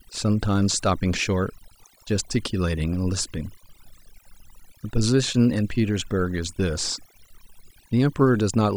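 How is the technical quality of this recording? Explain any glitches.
The recording has one problem that runs through the whole clip: overdone noise removal. A noise reduction stage was set far too aggressively, so it pulls individual frequency bands down to nothing whenever they sit close to what it has judged to be noise, and the softer parts of the speech get caught along with the noise. Between phrases the background drops to near silence scattered with twinkling specks.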